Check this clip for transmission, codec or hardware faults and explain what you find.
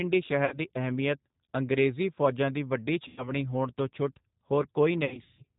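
Two faults are present: G.729 codec coding throughout the speech, and three bursts of VoIP packet loss concealed by the speech codec.

The G.729 codec is audible for the whole clip. It rebuilds speech from a vocal-tract model and sparse pulses, which makes the voice rough and synthetic, consistent with 8 kbit/s coding. On a spectrogram, everything stops sharply at 4 kHz.

Concealed packet loss occurs at 0.45–0.58 s (about 60 ms lost), 3.08–3.32 s (90 ms), and 5.05–5.42 s (240 ms scattered over 330 ms, longest run 150 ms). During each gap the decoder extends the last pitch and filter while lowering the gain, so the speech turns into a fading buzz or coloured noise. On a spectrogram this shows as smeared, repeating harmonics. On the waveform it shows as a decaying envelope before the level recovers.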